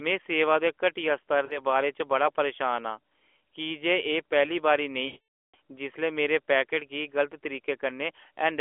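Lost AMR speech frames occur at 1.46–1.60 s and again at 5.06–5.55 s. Corrupted frames failed their checksum, so the decoder filled the gaps by repeating the last good pitch and vocal tract settings at falling gain. The first gap, 40 ms long, sounds like a short dip or warble. The second runs 480 ms, so the concealed sound smears and fades to silence, and the voice returns weak or rough. Both fit the band-limited AMR narrowband codec.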